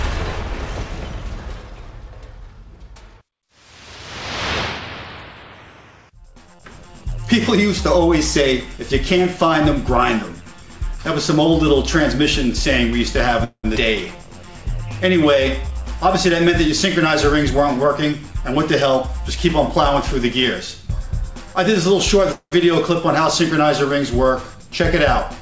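The audio has gone through a call link whose codec passes nothing above 8 kHz, which fits G.722 at 64 kbps. That link shows several faults. Twice, at 13.44 to 13.66 s and again at 22.32 to 22.53 s, there is a call audio freeze, most likely because packets were held up in transit and the jitter buffer ran dry. The receiver filled about 196 ms by carrying the last sound forward, and that fill decays into about 70 ms of silence. Each freeze inserts a gap into the audio without losing anything, because playback resumes exactly where it stopped. The overall delay grows by about 196 ms each time.

Shortly after the first freeze, a skip ahead occurs at 13.76 to 13.78 s. A stretch of roughly a tenth of a second was dropped, either in transit or by the buffer, while later audio was already waiting. Only about 7 ms of fill bridges the cut. Playback jumps forward almost seamlessly, and the sound on either side is spliced nearly directly, with that fragment simply absent.

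From 15.17 to 15.70 s comes a jitter buffer slow-down. The buffer was low, so the receiver rebuilt its reserve by repeating single pitch periods or bits of pause many times over, adding 43 ms. Playback runs at about 93 % speed with the pitch unchanged, so sounds in this half-second are audibly drawn out.

Immediately after, from 15.70 to 19.17 s, a jitter buffer speed-up takes over. The buffer now held more than its target, so the receiver trimmed short pieces, each one or a few pitch periods long, repeatedly, removing roughly 150 ms in total. Over these three and a half seconds the audio plays at about 104 % speed at the same pitch.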